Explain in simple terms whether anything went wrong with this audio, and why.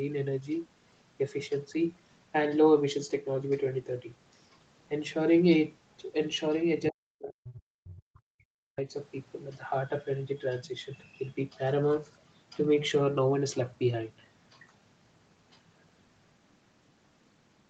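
Speech suppressed in double talk, from 6.89 to 8.87 s: the talker's voice sinks sharply, at its worst nearly to silence, for about two seconds. The likely cause is both sides speaking at once, so the echo canceller, unable to separate them, turned everything down.

Other side's voice leaking through, from 7.49 to 7.53 s: a brief, faint scrap of a second voice slips in, much quieter than the talker. It likely comes from the loudspeaker's sound reaching the microphone and not being fully removed by the echo canceller.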